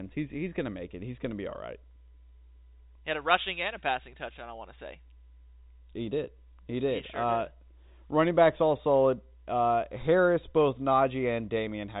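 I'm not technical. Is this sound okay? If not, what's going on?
Yes, nothing is wrong with this recording. It has passed through ordinary G.711 telephone coding, which removes everything above about 4 kHz, so the speech has the narrow sound of a landline call.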